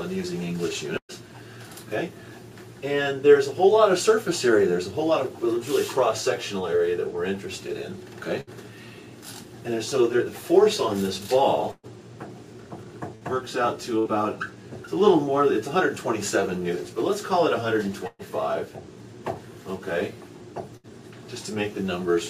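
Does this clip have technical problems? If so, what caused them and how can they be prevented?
Yes. Bursts of packet loss produce brief held, fading smears, some ending in silence, at 0.97, 8.41, 11.71, 13.15, 13.99, 18.07 and 20.77 s. Lost packets were concealed by stretching and fading earlier sound, skipping 60 or 120 ms each time. A larger jitter buffer plus redundancy or forward error correction on the link would prevent this.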